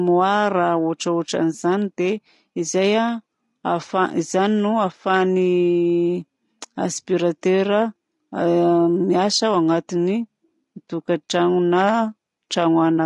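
From start to end the speech carries a rough, grainy texture, with a haze of noise filling the gaps between the pitch harmonics and a thin, somewhat artificial top band. This points to low-delay AAC compression, likely AAC-ELD as used in video calls, at a rate consistent with about 32 kbps. Its short frames cannot separate closely spaced harmonics cleanly, and too few bits remain to code the upper frequencies faithfully.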